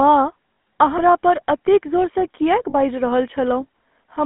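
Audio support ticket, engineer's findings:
GSM full-rate codec, throughout. Buzzy, gravelly roughness on the speech, plainly audible. Band-limited to roughly 250 Hz to 3.4 kHz, with nothing above that. Probable component: GSM full-rate encoder in the call path, consistent with a 13 kbps stream. Mechanism: vocal-tract filter driven by a regular pulse excitation that keeps only every third sample. Coarse excitation produces the grit.

Lost GSM frames, 0.54–0.58 s. Sound held as a short rough, metallic ring, 40 ms, which fits two dropped 20 ms frames. Mechanism: decoder repeats last good frame parameters in place of bad ones.

Lost GSM frames, 2.70–2.74 s, just after "पर एतेक जोरसँ". Same 40 ms metallic hold, same concealment by repeating the last good frame. Too short to fade to silence.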